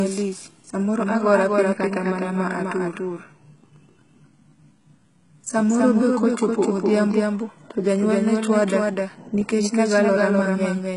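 A second path, likely a slower capture of the same feed, mixes in a doubled audio track throughout: a full-band copy trails roughly a third of a second behind, a few dB quieter, with no decay. The speech is also coded as HE-AAC compression, which fits a very low bitrate near 12 kbps. Nothing remains above 11 kHz, and the rebuilt treble makes s sounds gritty and metallic.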